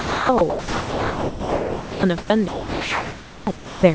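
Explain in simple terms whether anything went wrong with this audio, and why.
Speech keeps dropping out: at 0–0.29 s, 0.38–0.41 s, 0.50–2.03 s, 2.48–3.47 s and 3.56–3.83 s it turns into steady hiss. This is sound dropped by the voice detector, likely because the sender mistook speech for background and stopped transmitting.

At 2.18–2.30 s, the natural room background becomes a flat hiss at a slightly different level. This is comfort noise in place of the background, likely generated by the receiver while transmission paused.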